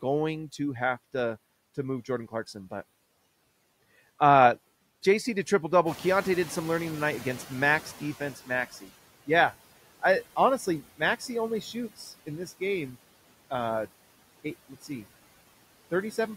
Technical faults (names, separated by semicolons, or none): noise suppressor artifacts; noise suppressor catching up; speech cut by the noise suppressor